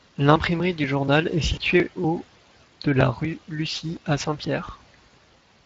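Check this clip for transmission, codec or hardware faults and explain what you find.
Two faults are audible in the speech.

From 0.12 s to 5.41 s there are periodic USB or driver dropouts. Every 0.24 s, roughly 10 ms of audio is skipped outright as a background task stalls the bus or driver, giving about twenty evenly spaced ticks. The ticks are heard only while sound is present, and their rigid regularity distinguishes them from network loss.

From 1.53 s to 1.59 s comes VoIP packet loss concealed by the speech codec. For 40 ms, which fits two lost frames, the decoder extends its last pitch and filter while lowering the gain. Instead of a click, this produces a stretched, fading sound that stays weak briefly afterwards. Beneath both faults, the Speex codec leaves only light coding damage.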